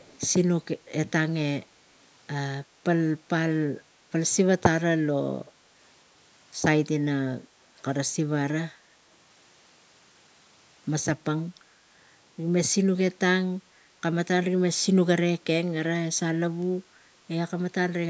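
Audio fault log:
0.0 to 0.2 s, echo leak: a faint delayed copy of the speech, about 30 dB below the direct sound and trailing it by roughly 263 ms, is audible as a low-level ghost at the very start of the clip. This is likely a far end playing the call on a loudspeaker whose echo canceller did not remove all of what its microphone picked up, so a small part of it was sent back.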